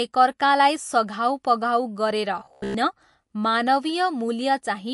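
Speech clip. Plainly audible MP3 compression throughout, likely at a low bitrate near 48 kbps: weak frequency lines drop out between frames, with nothing above 11.3 kHz. From 2.40 to 2.74 s there's robotic sound from repeated short buffers: a rigid buzz at 66.7 Hz covers most of that stretch, likely from about 15 ms chunks being replayed while real audio is skipped.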